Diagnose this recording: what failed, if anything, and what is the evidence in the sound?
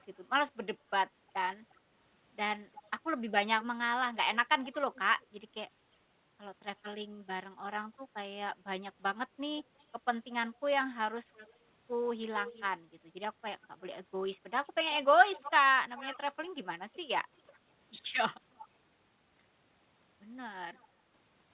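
A copy trails the speech by about 0.36 s at 0–5.27, 9.59–18.68 and 20.74–20.85 s, most audible mid-clip: likely an echo leak, where the far end's echo canceller let loudspeaker pickup return.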